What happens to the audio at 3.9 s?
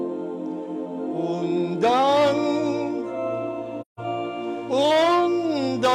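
Right there you hit AAC frame loss with muting. From 3.81 to 4.00 s the decoder zeroes the missing frames, so the sound fades into a soft-edged gap.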